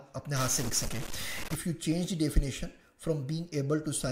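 From 0.36 to 1.55 s, a stuck bit is the likely cause: one bit of the sample data appears held at a fixed value, so roughly half the samples are shifted by a step of about -35 dBFS, following the waveform's shape. The result is a harsh, buzzy distortion over the sound in that span, and because the bit also flips with the sign of small values, quieter moments fill with a noise floor.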